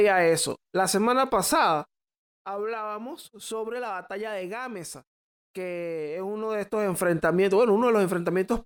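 It's a speech clip with a stretch of zipper noise from 1.77 to 2.24 s, just before "hablábamos sobre la batalla". The level drops by roughly 10 dB there, but in hard 1 dB steps at around fifty a second with no smoothing in between, so each jump leaves a tiny click. Strung together, those clicks come across as a fast ticking buzz riding on the sound while the gain moves down.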